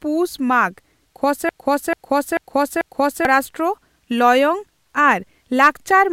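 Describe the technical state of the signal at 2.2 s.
At 2.2 s the speech is caught in a broken-record loop running from 1.49 to 3.25 s: a 0.44 s fragment repeats exactly, four times back to back. Likely the player or stream stalled and resent its last buffered piece, so the intended audio is lost.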